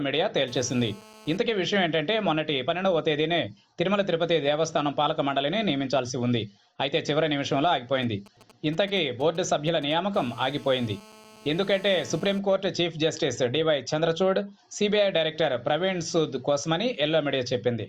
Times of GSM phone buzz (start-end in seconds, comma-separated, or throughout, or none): 0.48-1.37, 10.17-12.39